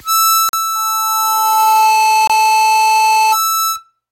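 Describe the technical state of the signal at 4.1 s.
At 4.1 s the music signal is intact, with no audible fault at that moment.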